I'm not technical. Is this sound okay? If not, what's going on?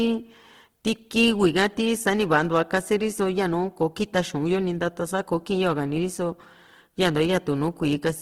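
No, the speech sounds grainy and rough all the way through. That's most likely Opus compression squeezing the file hard and filling gaps with noise.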